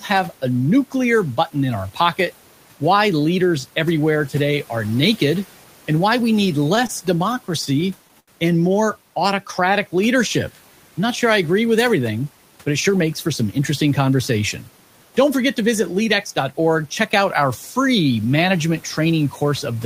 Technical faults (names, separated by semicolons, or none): repeated stalls (stutter); jitter buffer slow-down; jitter buffer speed-up